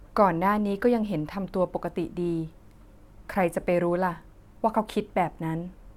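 No technical faults can be heard anywhere in the speech recording, with the signal holding steady throughout.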